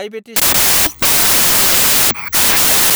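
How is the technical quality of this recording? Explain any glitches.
Poor from 0.36 s to the end, where a wrong sample width fault takes over. The 16-bit speech is being read as packed 24-bit samples, so bytes from neighbouring samples merge into garbled values. Loud broadband hiss buries the speech, which runs 1.5 times too fast and too high. The spectrogram fills with dense noise across all frequencies, with faint compressed speech traces, and the waveform jumps to a much higher level.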